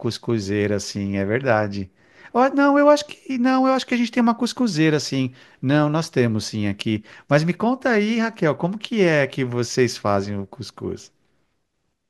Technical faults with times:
none

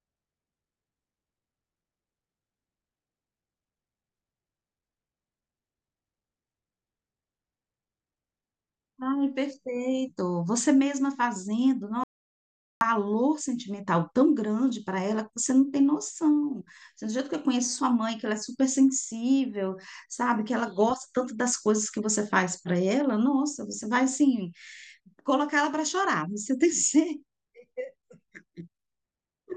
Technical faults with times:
12.04-12.81 audio dropout to silence

